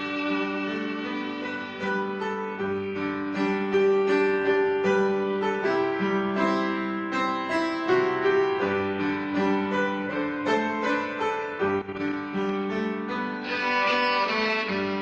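Nothing technically wrong can be heard anywhere in the audio. No timing, level or signal problem turns up at any point in the recording.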